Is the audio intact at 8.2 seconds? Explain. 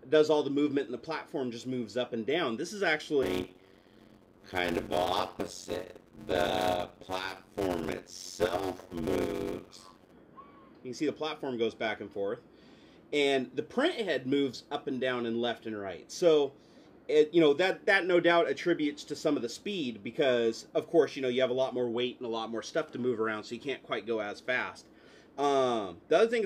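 No. From 3.22 to 10.11 s there is a block size mismatch (padded): each block is only partly filled, which fits 256-sample writes, and the remainder is zeros. This produces a 91.9 Hz buzz and slows the audio to 0.533 times its speed while timbre stays the same, unlike plain slow playback.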